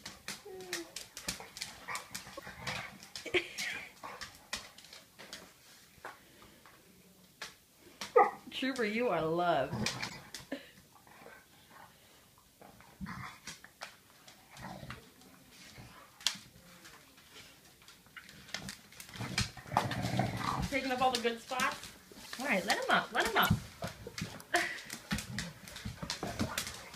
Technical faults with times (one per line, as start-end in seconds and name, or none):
2.37-2.43 corrupt frame decoded
3.58 corrupt frame decoded
9.00 corrupt frame decoded
10.08-10.16 corrupt frame decoded
22.20-22.26 corrupt frame decoded
23.36-23.49 corrupt frame decoded
24.42-24.47 corrupt frame decoded